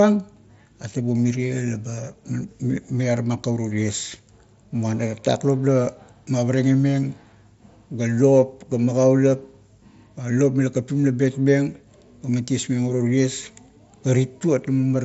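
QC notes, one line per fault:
No faults to note.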